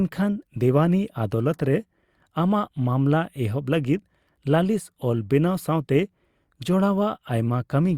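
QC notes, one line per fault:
No fault to note in this speech clip.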